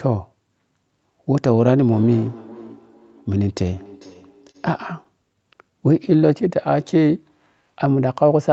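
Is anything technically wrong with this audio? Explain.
Yes. From 1.91 to 4.93 s, each phrase returns as a thin, ringing repeat roughly every 0.4 s, about 22 dB below the speech. This is feedback echo between two devices: a second device plays the call aloud and the first microphone picks it up again.

From 4.51 to 4.56 s, a sound is held about 29 ms too long with a slight buzz or dip. This is a short stall from a late packet: the jitter buffer ran dry and the receiver stretched the last sound until the packet arrived.

From 5.43 to 6.49 s, the speech drags at 94% speed with unchanged pitch and drawn-out sounds, adding 67 ms. This is a jitter buffer slow-down, where repeated pitch periods rebuild the buffer's reserve.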